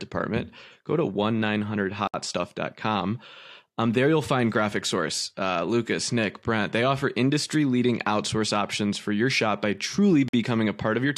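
At 2.07 s the speech drops into a sudden hole about 65 ms long, ending at 2.14 s, and at 10.28 s, right after "for your shop by", a second 50 ms silence cuts in before the sound resumes at 10.34 s. Both are gaps at a join of encoded pieces: separately encoded segments were spliced without trimming the encoder's start-up delay and last-frame padding, so that dead air sits between them, its edges softened by the codec.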